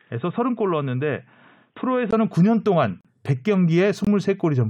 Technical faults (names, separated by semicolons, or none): input switched to a poorer device; gap between stream segments